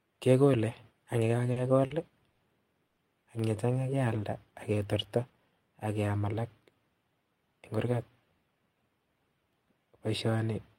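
At 1.52–1.59 s, 1.86–1.93 s and 2.32–2.42 s, short stalls from a late packet hold the speech for 40, 40 and 70 ms, giving a brief stretched buzz with nothing lost. At 2.87–3.00 s a longer 100 ms call audio freeze follows, likely from packets held up in transit. The held sound fades as a buzz rather than dropping to silence, then the speech resumes where it stopped.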